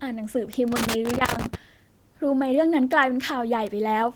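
Throughout, the speech passes through Opus voice compression at 16 kbps in hybrid mode, with linear-prediction coding below 8 kHz and a transform layer above, band reaching about 20 kHz. The coarse excitation coding at this rate leaves the voice plainly muffled, hoarse and slightly robotic.

At 0.53 s a bit error spike appears: one flipped bit throws a single sample off by a power of two before it snaps back, producing an isolated sharp tick unrelated to the speech.

From 0.68 to 1.55 s a loose connector crackle sets in, as a failing contact repeatedly makes and breaks, chopping the signal into an irregular burst of scratchy crackle.

Two more bit error spikes follow as lone clicks, at 2.93 s (one sample) and 3.67 s (two consecutive samples).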